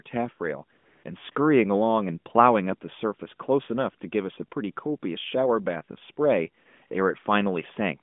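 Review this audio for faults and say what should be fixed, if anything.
The background drops out and is replaced by a smooth, steady hiss at 0.78 to 1.04 s, 1.32 to 1.36 s, 6.64 to 6.66 s and 6.88 to 6.90 s. This is AMR comfort noise: the phone judged these moments silent, stopped sending speech frames, and the receiver filled them with synthetic noise. Raising the voice-activity detector's sensitivity or disabling discontinuous transmission would keep real frames flowing through these gaps. The narrowband line itself, limited to about 150 Hz to 3.5 kHz, fits the 12.2 kbps AMR mode.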